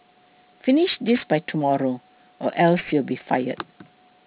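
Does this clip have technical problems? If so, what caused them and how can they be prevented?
Yes. Aliasing runs through the whole speech clip. The audio was cut from 16 kHz to 8 kHz without an anti-aliasing filter, so content above 4 kHz folds back down as gritty, metallic hash, roughly 20 dB below the signal. A plain low-pass would only dull sibilants, but this adds new, unrelated tones. To prevent it, apply a low-pass filter below 4 kHz before downsampling, or use a proper resampler.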